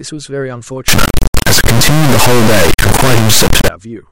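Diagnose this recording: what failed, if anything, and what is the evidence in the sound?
Sample-format conversion failed: integer read as float. From 0.88 s to 3.68 s the speech becomes an extremely loud, buzzing square wave, slamming between silence and the clipping limit. This points to 32-bit integer samples reinterpreted as 32-bit float, giving tiny, invalid or enormous values.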